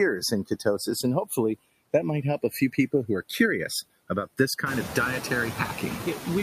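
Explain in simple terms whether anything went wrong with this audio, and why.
The two stereo channels are drifting apart. They were captured on separate clocks running at slightly different speeds, so by the end one side lags the other by about a millisecond. Played together or folded to mono, that sliding gap gives a slow, swirling flanging sound across the whole clip.

There are also noise suppressor artifacts all the way through. The suppressor pushes the background noise down hard, so the gaps between words go quiet and the noise bubbles back up under the speech.

Early on, from 0.21 to 0.66 s, the suppressor cut part of the speech, treating some softer sounds as noise. Altogether about a tenth of a second gets turned down with the background, so those bits sound swallowed or faint.

Around 4.5 s the room's own background noise gets louder, but that's the actual space the mic was in, not something the processing did.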